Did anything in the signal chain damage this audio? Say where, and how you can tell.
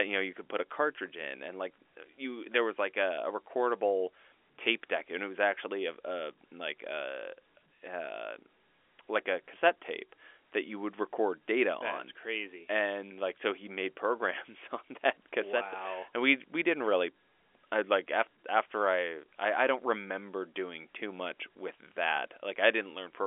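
No, no stage in the chain has damaged this speech; the only shaping is the expected G.711 telephone coding, here A-law, heard as a line band of roughly 300 Hz to 3.4 kHz with nothing above about 3.6 kHz.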